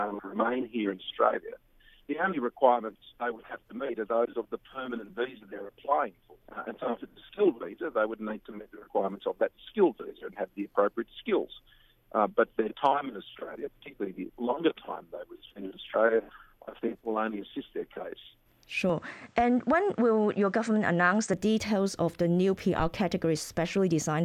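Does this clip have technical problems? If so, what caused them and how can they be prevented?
Yes. From 18.89 to 21.34 s the sound turns duller, with nothing above 9 kHz, then clears again. The likely cause is an input switched to a poorer device. A spectrogram shows the top band abruptly emptied, with no gap at the switch, while the waveform level barely changes and a faint new noise floor sits roughly 40 dB down. Locking the recording input to one fixed microphone and disabling automatic device switching prevents this.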